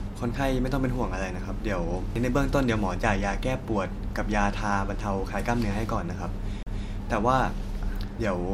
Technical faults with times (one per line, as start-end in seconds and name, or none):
2.15 CD skip
6.63-6.67 CD skip